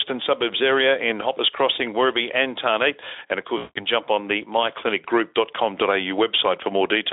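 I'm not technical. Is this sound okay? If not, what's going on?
No. From 3.57 to 3.86 s there is VoIP packet loss concealed by the speech codec: about 180 ms of audio never arrived, so the decoder stretched the preceding sound into a buzzy tone or coloured noise that fades, and the voice stays weak briefly after it resumes.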